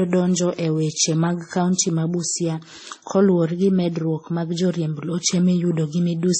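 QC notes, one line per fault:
Throughout: transcoding between lossy codecs. The speech sounds dull and smeared, with nothing above about 8.4 kHz and two layers of swirly, watery artefacts heard together. This likely comes from a WMA encode near 48 kbit/s re-encoded as MP3 near 32 kbit/s, each adding its own damage.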